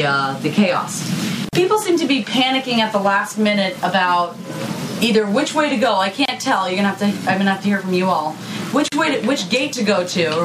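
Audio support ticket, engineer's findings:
Gap at a join of encoded pieces, three times: 1.49 s (about 42 ms), 6.25 s (about 29 ms), 8.88 s (about 39 ms). Dropouts with smeared edges, sound resumes where it stopped. Probable cause: segments encoded separately, concatenated without trimming encoder delay and last-frame padding.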